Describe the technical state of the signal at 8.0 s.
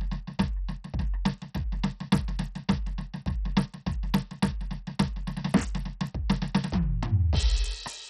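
At 8.0 s the music, like the whole clip, carries heavy gritty coarseness and flickering treble with nothing above 14 kHz, likely Bluetooth SBC compression starving the top sub-bands at a bitrate near 64 kbps. The grit is broad and even, not the swirly, warbling artefacts of a perceptual codec.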